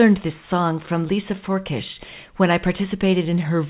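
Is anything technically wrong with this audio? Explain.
No, nothing is technically wrong with this speech recording: it has the narrow telephone-style bandwidth of a normal call path, with nothing above 4 kHz, which fits G.711 A-law coding at 64 kbps.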